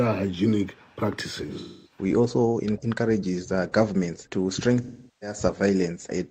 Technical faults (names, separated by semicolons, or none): AAC frame loss with concealment